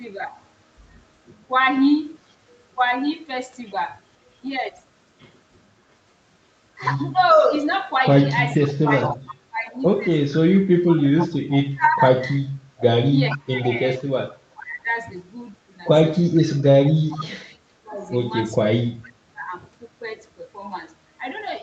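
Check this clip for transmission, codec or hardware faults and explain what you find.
Two call-path faults are audible: an echo leak and speech suppressed during double talk.

From 7.29 to 13.38 s an echo leak is audible: a delayed copy of the speech returns about 460 ms late, roughly 10 dB below the direct speech. The likely cause is a far-end loudspeaker whose echo canceller let part of the microphone pickup through and sent it back.

Speech is suppressed in double talk at 7.4–9.8 s, 11.63–14.89 s and 16.75–19.54 s. Where both sides overlap, the echo canceller likely confuses the talker with echo and turns everything down. The speech drops by around 25 to 30 dB and cuts out in pieces, about one to two seconds in each stretch, under the 8 kHz upper limit of the Opus path.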